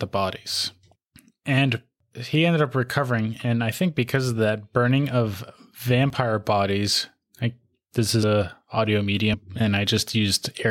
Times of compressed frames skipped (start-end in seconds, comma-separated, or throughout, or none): 8.22, 9.33